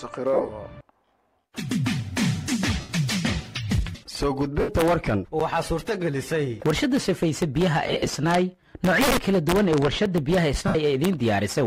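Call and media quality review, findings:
Lost LE Audio frames at 0.34–0.49, 2.80–2.90, 4.60–4.69, 7.87–8.13 and 10.68–10.75 s: LC3 concealment reuses the last spectrum with random signs, so the sound turns to a brief noisy smear.

Block of digital silence at 5.40 s (10 ms) and 10.06 s (5 ms): output buffer likely not filled in time, so there is an abrupt cut short enough to be heard as a tick or dip.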